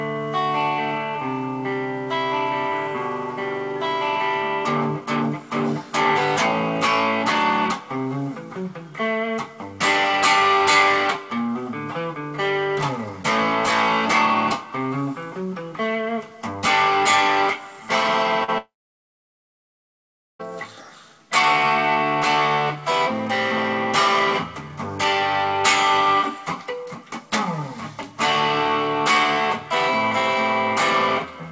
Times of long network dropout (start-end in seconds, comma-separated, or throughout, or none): 18.58-20.41